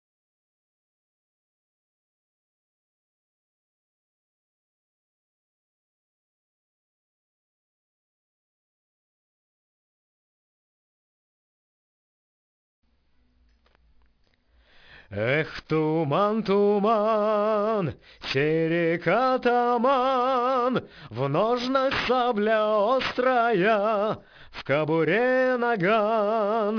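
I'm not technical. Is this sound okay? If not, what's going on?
No, there is aliasing from start to finish. The sound was likely squeezed down to a much lower sample rate, around 11 kHz, without first removing the high frequencies. Anything above 5.5 kHz folds back as false, unrelated tones, giving a gritty, metallic edge.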